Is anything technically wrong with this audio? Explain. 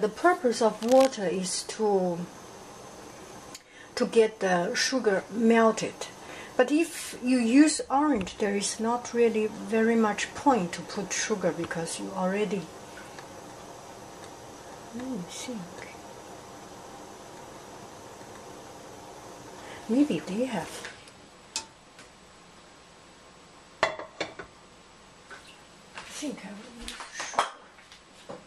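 Yes. From 0.82 to 1.09 s, cable scratch noise adds brief, uneven rustling about 10 dB below the sound. A worn cable or connector being moved likely causes it, its contact resistance jumping erratically. A spectrogram shows dense broadband speckle; the waveform shows jagged, irregular spikes.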